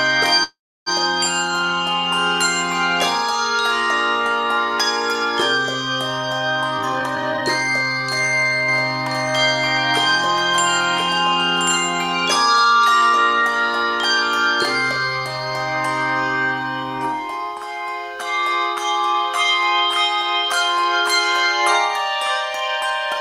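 Call audio freeze, 0.43 to 0.89 s: the sound halts and the last fragment is stretched into a fading buzz that ends in about 0.3 s of silence. Then the audio resumes exactly where it stopped, with nothing lost. This is likely a jitter buffer running dry while packets were held up, which adds about 0.43 s of delay from here on.

Jitter buffer speed-up, 6.78 to 7.42 s: the receiver trimmed pitch-period-sized slices repeatedly to shed excess buffered audio. It removed roughly 0.3 s, so the passage plays at 143% speed with unchanged pitch and sounds noticeably rushed.

Doubled audio track, 8.69 to 11.77 s: a second full-band copy runs about a second behind the original at about 5 dB lower. It has no reverberant tail or room colour, and it starts and stops abruptly. This points to a likely second capture path or a misaligned duplicate.

Jitter buffer speed-up again, 12.65 to 13.42 s: this time only about 50 ms is trimmed, giving 106% speed, a slight hurry.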